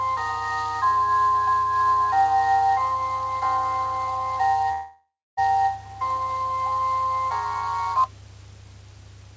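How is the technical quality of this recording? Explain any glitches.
The recording has one clear glitch. From 4.72 to 5.39 s, a likely long network dropout leaves the audio stretched into a fading buzz, then about 0.29 s of silence, with roughly 0.66 s lost; the call codec's band stops at 8 kHz.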